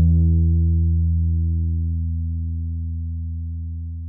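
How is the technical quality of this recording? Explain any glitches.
The technical quality of this recording holds up, with no glitches to explain.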